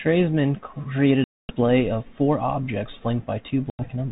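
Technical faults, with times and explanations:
1.24–1.56 s and 3.70–3.84 s, packet loss on an ADPCM call: runs of packets went missing, about 250 ms' worth in the first gap and about 90 ms in the second. The gaps fit something like 30 and 10 small packets. The holes were filled with silence, so the speech drops out with hard edges. While it was gone, the receiver's adaptive predictor and step size drifted away from the sender's. When sound resumes it comes back slightly distorted, then settles within a few tens of milliseconds as the light 32 kbit/s G.726 coding re-locks.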